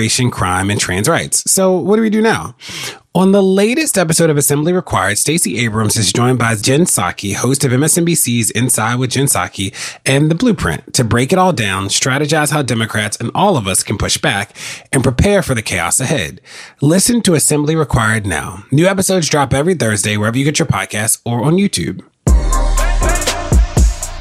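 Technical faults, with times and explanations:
Nothing technical stands out here; the audio runs along without any faults to point to.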